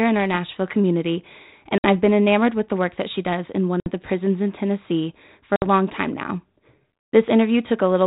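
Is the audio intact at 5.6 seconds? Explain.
No. Packet loss on an ADPCM call cuts a hard-edged, 60 ms silent hole from 5.56 to 5.65 s. The decoder's adaptive predictor and step size lose step with the sender's, so the speech returns briefly distorted before settling.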